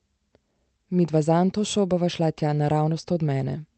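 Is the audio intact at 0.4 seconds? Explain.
Yes, the speech at 0.4 seconds is intact, with nothing there beyond the ordinary sound of a normal call connection.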